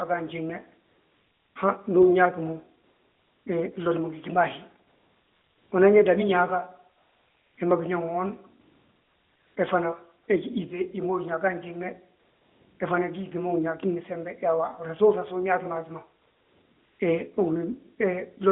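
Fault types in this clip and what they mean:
AMR comfort noise: the sender judged the line silent and stopped sending speech frames, so the receiver synthesised a smooth, steady hiss in their place. This happens eight times, from 0.88 s to 17.0 s, with gaps mostly around 0.6 to 0.96 s and one brief 40 ms dip between "he fana" and "he gí yíŧe hima". On a spectrogram each gap shows as a flat, featureless noise band. On the waveform it shows as an even low-level strip in place of the irregular real background.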